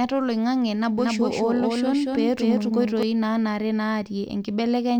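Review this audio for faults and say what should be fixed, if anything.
From 0.99 s to 3.03 s the speech is doubled: a second, equally loud copy trails about a fifth of a second behind, with no reverb tail or room colour, and it cuts in and out abruptly at both ends. This doubled audio track is likely caused by the same signal reaching the mix twice, once directly and once through a slower path, or by an edit leaving two out-of-step copies overlapping. To prevent it, route each source through a single path and check edits for overlapping duplicate regions.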